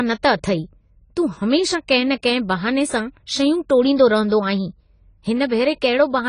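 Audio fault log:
Throughout: AAC compression, likely at a low bitrate around 24 kbps; the speech is dull, nothing above 10 kHz, with warbly, smeared sibilants.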